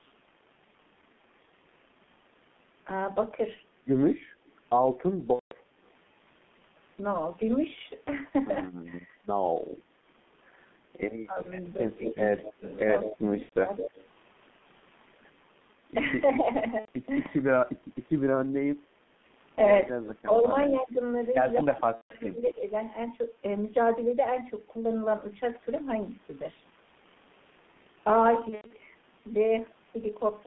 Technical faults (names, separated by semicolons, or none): G.723.1 codec; VoIP packet loss concealed by the speech codec; speech suppressed in double talk; echo leak